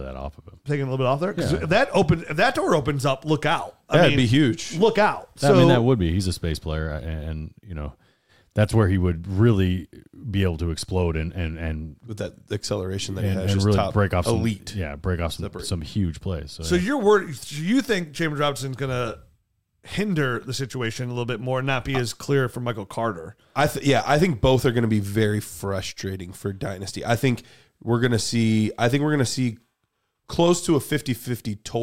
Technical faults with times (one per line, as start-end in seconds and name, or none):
none